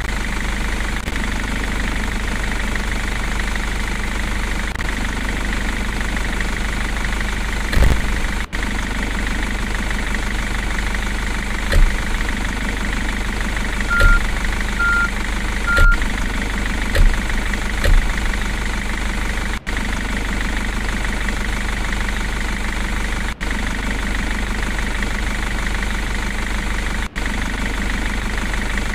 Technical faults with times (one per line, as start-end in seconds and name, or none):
0.00-8.24 buffer tearing